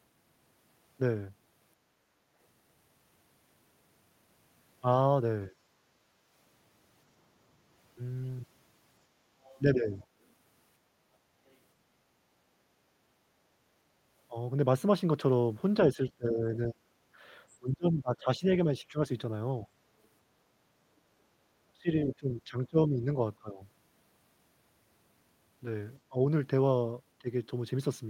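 At 2.04 to 2.2 s the room background dips by about 6 dB for roughly 150 ms. This is background gated by the echo canceller. It turned the microphone down while the loudspeaker played.

At 5.49 to 5.6 s the speech drops by about 20 dB. This is likely speech suppressed in double talk. The canceller ducked the talker while the far side spoke.

At 9.43 to 9.6 s a faint second voice sits about 30 dB below the speech. This is the other side's voice leaking through, likely from incomplete echo cancellation.

At 9.75 to 10.07 s the speech dips by about 10 dB. Double-talk suppression is the likely cause.

At 11.48 to 11.56 s a fainter leak comes through, about 40 dB down. Incomplete cancellation is the likely cause.

The speech then dips at 15.95 to 19.73 s, falling by up to about 25 dB. Double-talk suppression is the likely cause.

At 21.67 to 23.6 s the speech drops by about 20 dB. This is likely speech suppressed in double talk.

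At 26.08 to 27.28 s it dips by about 20 dB for roughly 150 ms. Double-talk suppression is the likely cause.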